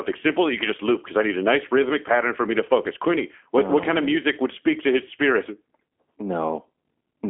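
Speech heard through the G.729 codec from start to end. It sounds thin and slightly synthetic, which fits 8 kbit/s coding. The band runs 250 Hz to 3.4 kHz, with nothing above 3.7 kHz.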